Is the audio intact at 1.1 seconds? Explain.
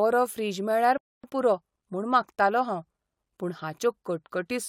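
No, a rebuffering stall runs from 0.98 to 1.24 s. The player exhausted its downloaded audio and paused until more data arrived, so the speech drops to silence for about 0.26 s, then resumes exactly where it stopped, with nothing missing but time added.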